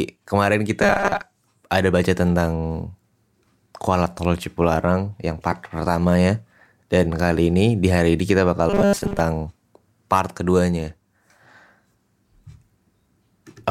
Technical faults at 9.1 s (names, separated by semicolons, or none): robotic sound from repeated short buffers